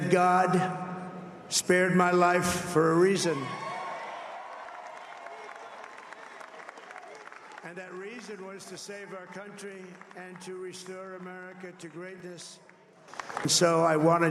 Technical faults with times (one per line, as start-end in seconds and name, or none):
none